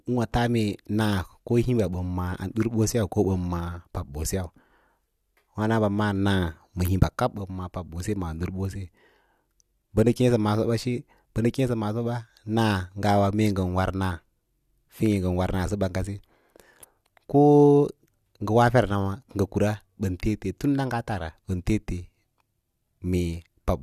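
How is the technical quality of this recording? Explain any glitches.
Nothing goes wrong anywhere in this speech recording, so there aren't any glitches to explain.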